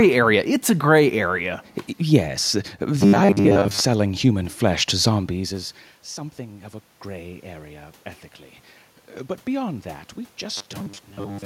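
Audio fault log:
3.01–3.81 s and 10.57–11.45 s: robotic sound from repeated short buffers. The speech turns into a rigid, metallic buzz locked at 100 Hz that still loosely traces the syllables. This is likely audio arriving too seldom, with playback refilling the gaps by looping the last 10 ms (the reciprocal of 100 Hz) for most of each stretch while the real audio is skipped. Unlike mains hum, the buzz rides only on the speech and vanishes outside these spans. Unlike a dropout, nothing goes silent.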